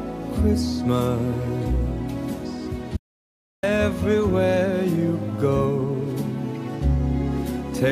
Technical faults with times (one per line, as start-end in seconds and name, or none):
2.97-3.63 audio dropout to silence